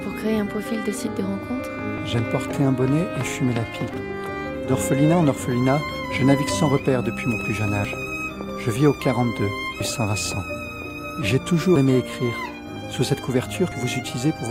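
Audio missing between chunks at 1.98, 3.94, 5.89, 7.85, 9.80, 11.76 and 13.72 s: roughly every 2 s, about 40 ms of sound skips abruptly, likely lost while the recorder switched between 2-second chunks.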